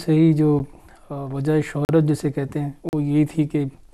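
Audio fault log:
0.59 s, 1.85–1.89 s and 2.89–2.93 s, block of digital silence: the sound drops straight to silence with no fade. The 9.5 ms one is just a tick, while the two 40 ms ones open into short audible holes, likely from a missed buffer fill.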